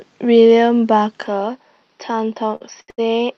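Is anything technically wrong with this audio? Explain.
Yes, there are two faults.

From 1.27 s to the end, the sound turns duller and about 5 dB quieter, with nothing above 5.9 kHz and a faint new noise floor. This is likely an input switched to a poorer, narrower-band device.

Short stalls from late packets occur at 2.55–2.63 s, 2.81–2.90 s and 2.90–3.00 s. The receiver held the last sound for 53, 75 and 78 ms while waiting, so the sound drags with no gaps.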